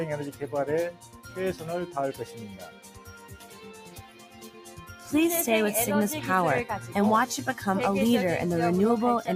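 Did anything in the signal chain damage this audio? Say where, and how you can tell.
Yes. In call processing, a speech noise suppressor was left on for this material, so level swings by roughly 10 dB as it pumps sustained parts down between attacks.

Sound cut by the noise suppressor shows at 0.32–0.47 s, 0.91–1.37 s and 2.18–5.09 s, sinking about 8–9 dB as it treats held sound as noise.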